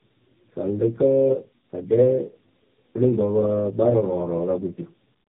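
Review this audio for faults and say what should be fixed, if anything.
Tandem speech coding runs through the whole clip. The speech sounds rough, muffled and warbly, with nothing above 3.7 kHz. The sound points to two AMR-NB narrowband encodes in a row, joined through a G.711 link. The first encode sounds low-rate, and the second coder rebuilt its errors. To prevent this, keep one codec end to end or pass coded frames through without transcoding, so the speech is decoded only once.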